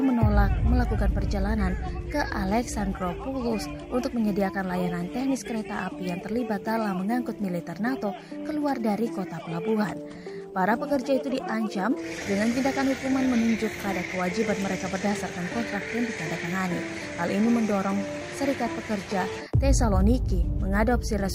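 Nothing stood out on listening; no technical faults could be heard anywhere in the clip.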